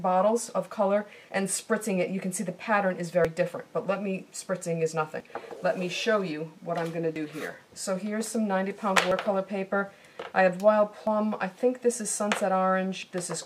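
At 3.25, 5.20, 7.16, 9.11, 11.07 and 13.03 s the audio skips: a short piece, roughly 40 ms, drops out and the sound on either side butts together with no gap of silence. The skips recur about every 2 s, which points to audio missing between chunks, likely from a recorder or processor handling 2 s blocks and discarding a sliver each time it closes one block and starts the next.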